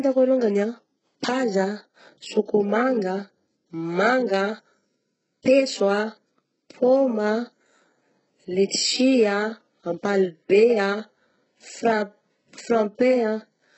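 It's a speech clip with heavy HE-AAC compression damage all the way through. Nothing comes through above 8 kHz, and the treble up to there sounds rebuilt, with gritty, lispy s sounds that likely come from band replication at something like 8 kbps.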